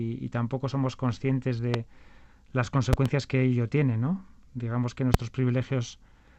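At 1.74 to 1.77 s a loud pop cuts through, a sharp single transient peaking around 20 dB above the surrounding sound. From 2.93 to 3.08 s two pops arrive in quick succession, and a final single pop sits at 5.14 to 5.17 s. Each is likely a brief voltage spike, from a plug, switch, static discharge or driver glitch, added onto the signal, with the sound continuing uninterrupted underneath.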